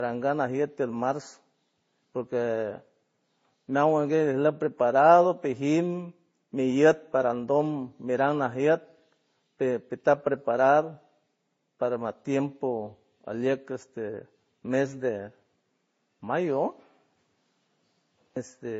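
Speech throughout sounds dull and smeared, with nothing above 7.5 kHz and mixed swirly, grainy artefacts, likely transcoding between lossy codecs, a low-bitrate MP3-style encode re-encoded to Vorbis.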